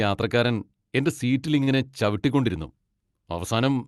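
A short stall from a late packet occurs at 1.63 to 1.76 s in this speech clip, just after "യാത്രക്കാരൻ എൻ്റെ സീറ്റിൽ". The jitter buffer ran dry, so the receiver stretched the last sound by 37 ms until the packet arrived. Nothing is lost, but that sound lingers slightly too long. Playback then resumes 37 ms later than before. The call codec's 12 kHz upper limit fits Opus at around 40 kbps.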